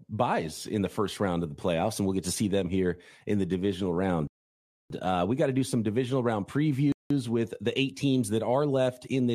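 At 4.27 to 4.90 s after "here in the divisional", and 6.92 to 7.11 s before "with the eight", rebuffering stalls insert silence; speech resumes intact, shown as flat waveform gaps and blank spectrogram columns.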